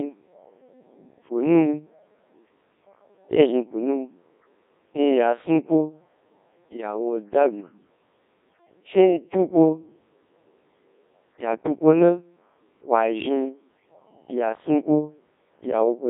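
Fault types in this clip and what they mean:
Codec 2 vocoder, throughout: the speech is rebuilt from sine waves carrying only pitch, voicing, energy and a spectral envelope, so it sounds heavily robotic and buzzy. It is confined to 250 Hz to 3.7 kHz, with nothing above 3.8 kHz, and the codec runs at 1.6 kbit/s.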